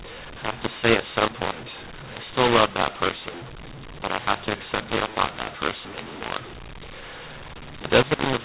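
Mu-law and A-law mixed up, throughout the clip: the speech was coded as A-law G.711 but decoded as mu-law, so sample levels are remapped wrongly. Some peaks swell while others shrink, giving harsh, gritty distortion, and quiet gaps fill with hiss within the 4 kHz telephone band.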